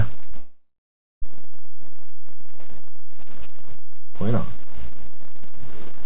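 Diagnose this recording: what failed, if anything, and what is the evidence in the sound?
A DC offset sits on the whole recording. It points to the analogue front end or the converter. The waveform rides on a constant shift away from zero. You cannot hear it directly. It shows as steady energy at the lowest frequencies and wastes headroom.

Short concealed packet loss occurs at the network stage, at 0.30 to 0.34 s and again at 0.34 to 0.37 s. Each gap lost about 20 ms of audio. The receiver patched each hole by extending the previous sound. The result is a quick smear or wobble.

A long network dropout follows, from 0.37 to 1.24 s. Nearly 0.9 s never arrived. The receiver first continues the last sound as a fading buzz or hiss. Then about half a second of near silence remains. Sound resumes afterwards with that stretch missing. A network outage is the likely cause. The call path itself is band-limited, with nothing above 4 kHz, which fits G.711 A-law.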